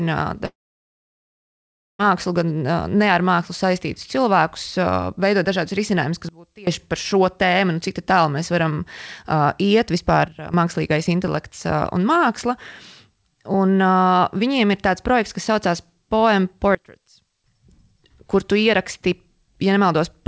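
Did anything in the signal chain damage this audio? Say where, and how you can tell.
Yes. A long network dropout runs from about 0.46 s to 2.01 s. Packets stopped arriving, so the receiver kept extending the last sound as a buzz that fades away. After that, roughly 1.5 s is left as silence or low steady noise. When the speech resumes, the missing stretch of about 1.5 s is simply gone rather than delayed. That is the signature of a network gap, likely from lost packets rather than a local fault.

Sudden gain jumps occur at 6.29–6.67 s, right after "veidot dažādus risinājumus", where the level drops by about 24 dB; at 10.28–10.54 s, just before "mākslīgais intelekts", down by about 12 dB; and at 16.75–17.44 s, down by about 24 dB. Speech and background noise fall and recover together from one sample to the next, with no ramp. That points to a digital gain change, likely a setting or bit shift applied abruptly in the processing chain.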